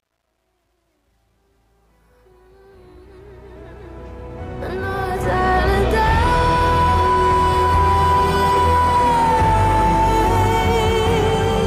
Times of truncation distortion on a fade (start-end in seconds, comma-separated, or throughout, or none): 0.00-5.58